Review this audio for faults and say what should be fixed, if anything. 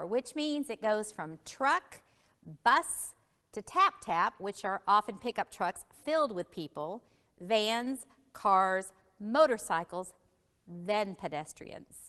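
No faults turn up in this audio, so nothing needs to be fixed.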